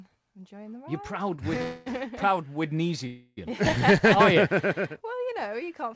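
At 1.36 s a short stall from a late packet holds the current sound about 20 ms too long, up to 1.41 s. The packet missed its slot, the jitter buffer emptied, and the receiver extended the last sound until the data arrived. Nothing is lost, and everything after is simply 20 ms later. On a spectrogram the harmonics run flat for that instant, and the waveform shows a short stretch of repeated cycles with a slight dip in level.

Two call audio freezes follow, from 1.62 to 1.89 s (242 ms) and from 3.07 to 3.40 s (301 ms). Each time the audio stops moving forward and the last sound is drawn out into a buzzy, fading hiss, never reaching full silence, before playback resumes exactly where it paused. The likely cause is packets held up in transit until the buffer ran dry. On a spectrogram these show as horizontal smears, while the waveform shows a decaying, repetitive tail. Every such hold-up pushes the audio later without removing any of it. 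Throughout the clip the spectrum stops cleanly at 8 kHz, which fits a G.722 call link at 64 kbps.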